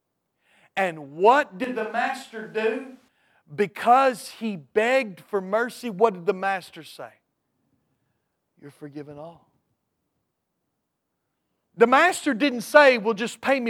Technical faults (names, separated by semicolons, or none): switch to a distant microphone